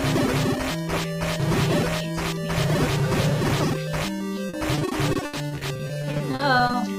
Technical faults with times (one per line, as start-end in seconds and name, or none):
4.49-6.75 repeated packet loss (robotic sound)